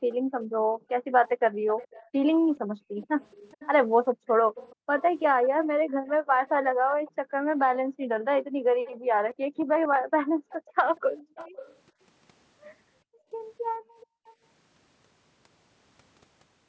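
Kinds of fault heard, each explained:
Background gated by the echo canceller: while the far end's audio was playing, the canceller pulled the microphone down by as much as about 40 dB, so the room sound dips and vanishes in stretches across 0.0–2.96 s, 4.15–11.35 s and 13.04–14.26 s, returning once it releases.
Echo leak: a delayed copy of the speech comes back 422 ms late, roughly 20 dB below the main speech during 0.11–7.59 s and 8.84–11.76 s, with a fainter scrap near 14.3 s, likely residue a loudspeaker-side echo canceller failed to remove.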